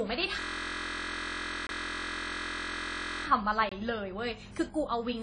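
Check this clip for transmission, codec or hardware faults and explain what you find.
Three kinds of fault are audible in this speech clip: a dulled, doubly smeared tone across the whole recording, a long stretch of frozen buzzing, and two brief dropouts.

Throughout, the audio sounds muffled and grainy at once, with nothing above 10 kHz and two different flavours of compression smear layered on each other. This is likely transcoding between lossy codecs: a low-bitrate AAC encode followed by a WMA re-encode at a similar low rate. The second codec wastes bits reproducing the first one's artefacts while adding its own, and the 10 kHz ceiling from the chain persists.

From 0.40 s to 3.27 s the speech gives way to a steady buzz at 43.1 Hz, a tiny 23.22 ms slice of sound repeating exactly, over and over. This is a system hang loop: the computer or driver stalled while the audio hardware kept replaying the same ring buffer, which fits a 1024-sample buffer. 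Because the loop is so short, it fuses into a tone rather than a stutter, and no audio appears to be lost around it.

At 1.67 s to 1.69 s and again at 3.69 s to 3.72 s, the sound drops out for 23.22 ms. These are gaps between chunks, spaced 2 s apart. The audio was delivered in 2-second pieces, and silence was left at each join. The first gap falls inside the looping stretch, so it briefly punches a hole in the buzz.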